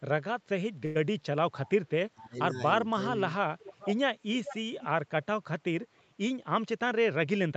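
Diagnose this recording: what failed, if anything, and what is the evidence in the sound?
At 0.85 to 0.97 s the network delivered a packet late and the jitter buffer ran dry. The receiver stretched the last sound for 97 ms, then resumed exactly where it left off. This short stall from a late packet is a held sound rather than a gap, so nothing is missing.

From 1.49 to 1.80 s the level ducks by roughly 20 dB, and from 2.13 to 2.57 s by about 15 dB. This is likely speech suppressed in double talk: the call's echo canceller mistook simultaneous talk for echo and attenuated both. The sound is turned down, not stretched.

A delayed copy of the sound returns 444 ms late at 3.61 to 3.94 s and 4.33 to 4.58 s, about 10 dB down. It recurs at 4.80 to 4.88 s, about 20 dB down, and at 5.81 to 6.02 s, faintly, about 40 dB down. This is likely echo leak from a far-end loudspeaker that the echo canceller missed. 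The fixed delay separates it from room reverberation.

From 6.45 to 7.53 s the jitter buffer sped up to 108 % to drain surplus delay, cutting roughly 100 ms in small pitch-period pieces. The audio sounds hurried while pitch stays unchanged, which distinguishes this jitter buffer speed-up from a sample-rate error.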